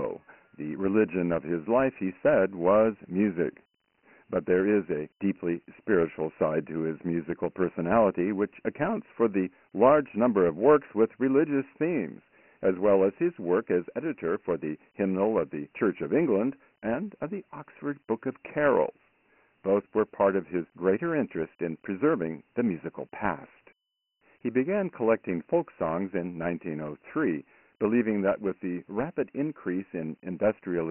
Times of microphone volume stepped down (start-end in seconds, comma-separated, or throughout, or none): none